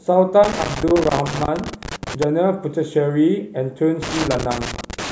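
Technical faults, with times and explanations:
0.44–2.24 s and 4.02 s to the end of the clip, loose connector crackle: a worn or dirty contact in the signal path keeps opening and closing as it shifts, so the speech is chopped into fragments and any DC offset on the line jumps at each break, adding pops. The result is a ragged, irregular scratching. On a waveform it shows as jagged dropouts and sharp spikes; on a spectrogram, scattered vertical broadband streaks interrupting the speech.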